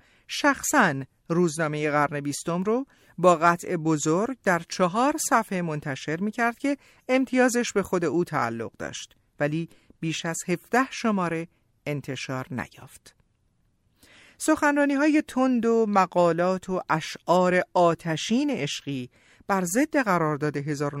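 Speech, with two brief corrupt frame decoded blips at 3.63 s and 12.84 s, quiet chirps near -45 dBFS where damaged compressed frames played anyway, misplacing energy rather than muting like lost frames.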